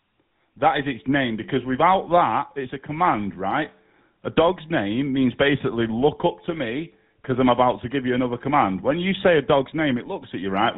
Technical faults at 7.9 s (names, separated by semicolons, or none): GSM full-rate codec